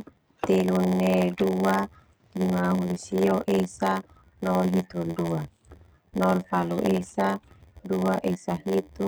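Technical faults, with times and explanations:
Throughout: block size mismatch (padded). One stage delivers blocks shorter than the next stage reads. The missing part of each block is filled with silence. That brief gap recurs at about 86.1 Hz, which fits a 512-sample read buffer. The gaps are heard as a steady buzz under the speech. Each block also carries extra empty time, so the speech runs at 0.938 times normal speed. Its timbre stays.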